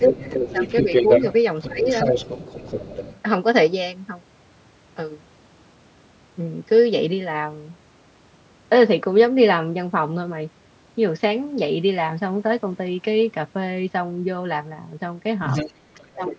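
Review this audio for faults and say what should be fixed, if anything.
Other side's voice leaking through, 0.0 to 1.34 s, 1.62 to 3.2 s, 15.46 to 15.73 s and 15.94 to 16.33 s: a second voice sits under the talker. It is roughly as loud as the talker at first, a little quieter in the middle two stretches and well below it at the end. The likely cause is the far end playing from a loudspeaker into the microphone, with the echo canceller leaving residue behind. To prevent it, use a headset or retune the echo canceller so it converges faster and removes the residual echo.

Speech suppressed in double talk, 0.08 to 0.19 s, 1.66 to 1.87 s and 16.15 s to the end: the talker's level dips while the leaked voice overlaps. The dip is slight at first, clearly deeper in the second stretch and steep at the end. This points to the canceller failing to separate the two voices and turning everything down. 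To prevent it, use a canceller with proper double-talk detection that preserves near-end speech during overlap.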